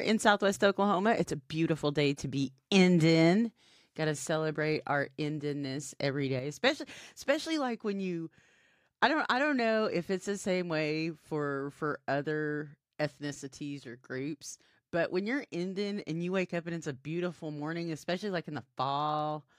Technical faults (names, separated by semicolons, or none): one channel drops out